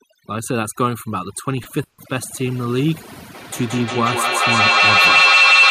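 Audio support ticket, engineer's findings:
Overdone noise removal across the whole clip: background dropped and broken up into twinkling specks. Suppressor set too hard, chopping out bands near its noise estimate.

Short stall from a late packet, 1.63 to 1.67 s: sound held about 20 ms too long, nothing lost. Jitter buffer ran dry and the receiver stretched the last sound.

Call audio freeze, 1.83 to 2.00 s: last sound stretched into a fading buzz or hiss, then about 70 ms of silence. Roughly 150 ms gap inserted, nothing lost. Likely packets delayed in transit, emptying the jitter buffer.

Feedback howl from 3.35 s to the end: a tone around 3 kHz builds to about 9 dB above the speech and pulses roughly every 200 ms. Two devices in one room on the call, with the mic-to-speaker loop gaining level on every pass.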